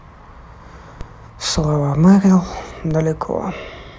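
At 1.01 s a DC step occurs in the speech. The waveform's zero line suddenly jumps by about -16 dBFS. A 20 Hz high-pass then pulls the offset back to zero. The sudden shift comes out as a short low thump. The speech carries on unchanged through it. At 2.91 s the same DC step happens again, with the same size and the same quick decay, giving a second identical thump.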